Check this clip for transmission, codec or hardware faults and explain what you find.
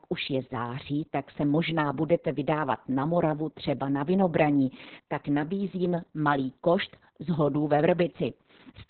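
One codec fault runs through the whole clip: Opus voice compression. Nothing reaches above about 4.4 kHz, so the speech sounds narrowband and muffled. The coarse SILK excitation makes it hoarse and slightly robotic. That fits a very low bitrate near 6 kbps.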